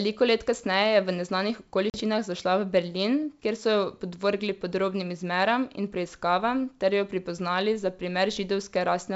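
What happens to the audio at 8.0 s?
Nothing goes wrong at 8.0 s: the speech stays intact, carried cleanly through G.722 wideband telephone coding at 64 kbit/s with no more than faint coding damage.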